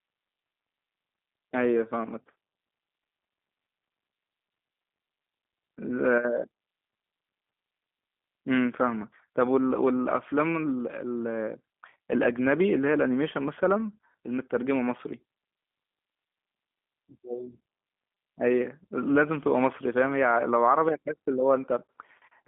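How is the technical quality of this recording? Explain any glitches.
The technical quality is limited by plainly audible telephone-codec processing across the whole recording. G.729 codec damage runs throughout: the speech is rebuilt from a filter model plus sparse pulses, giving rough, synthetic timbre within a 200 Hz to 3.5 kHz band, which fits the 8 kbit/s G.729A codec. Unlike simple band-limiting, the roughness itself marks a model-based codec.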